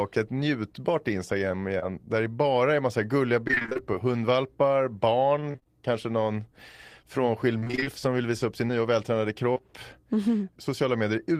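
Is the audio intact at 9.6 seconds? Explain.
No. Right after "sin nya och vältränade", short concealed packet loss strikes twice, 9.53–9.58 s and 9.58–9.61 s, each losing about 20 ms. The receiver extended the preceding sound to bridge each gap, causing a brief smear. A spectrogram shows prolonged, static harmonics or a noise patch blending back in.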